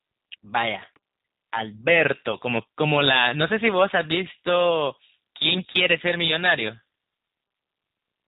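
The whole clip carries G.729 codec coloring: speech band-limited below 4 kHz, slightly rough and synthetic, which fits an 8 kbit/s VoIP link. Around 2.32 to 2.35 s there's VoIP packet loss concealed by the speech codec: about 10 ms of sound went missing, and the decoder papered over it with a brief, weakened stretch of extrapolated sound that fades. From 5.44 to 6.54 s the level is pushed about 7 dB past the clipping point, so hard clipping flattens the peaks and adds distortion to the louder sounds. Inside that stretch, at 5.58 to 5.62 s, another concealed packet loss smears a short 10 ms gap into the same kind of fade.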